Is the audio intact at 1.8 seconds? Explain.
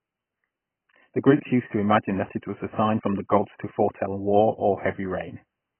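No. At 1.8 seconds the speech carries the same damage it has from start to finish, most likely AAC compression at a very low bitrate, something like 12 kbps. Short of bits, the encoder has dropped everything above about 3.1 kHz and quantised what remains so coarsely that gaps open up in the spectrum. So it sounds dull and smeared, with a warbly, fizzy edge on sustained sounds and sibilants.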